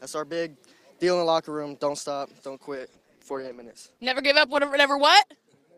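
From 2.75 to 4.75 s, the adaptive stream drops to a lower bitrate. The quality changes suddenly and codec artefacts rise, with no gap. This fits a switch from roughly 64 kbit/s Opus to 16 kbit/s.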